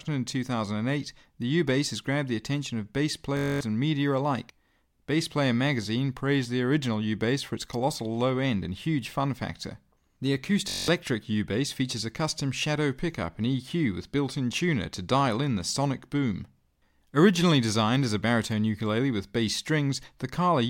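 At 3.37 s, just after "the attention of bass", and again at 10.69 s, a system hang loop repeats one 21.33 ms chunk, fitting a 1024-sample buffer. It sounds like a 46.9 Hz buzz, shows as identical waveform tiles and harmonic stripes, and drops about a fifth of a second.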